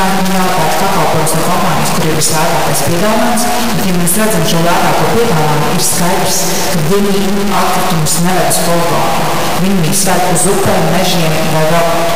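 Harsh, buzzy distortion runs through the whole clip, with loud noise filling the pauses. The likely cause is a stuck bit: a high data bit, worth about -10 dBFS, frozen in place.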